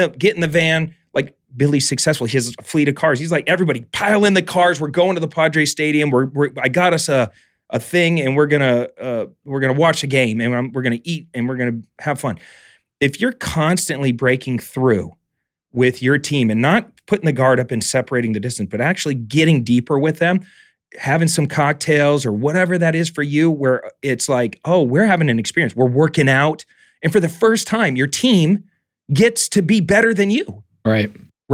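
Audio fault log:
No technical faults are audible anywhere in the speech recording.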